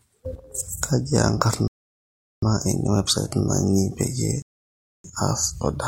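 At 1.68 s the speech drops to silence until 2.42 s, adding about 0.75 s. A second gap runs from 4.42 to 5.04 s, adding 0.62 s. Both are rebuffering stalls: the player ran dry and waited for data. Speech resumes exactly where it stopped, with nothing lost.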